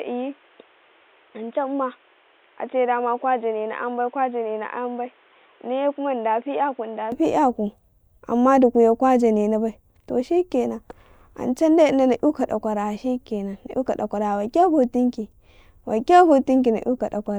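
From the start of the speech up to 7.12 s, the sound is narrow and boxy, with nothing above 3.8 kHz. It's noticeably quieter, by around 10 dB, and has a noise floor sitting roughly 30 dB under the voice. At 7.12 s it opens up into full bandwidth with no gap at the change. That's most likely an input switched to a poorer device, a second mic or a headset call profile, that was later swapped back.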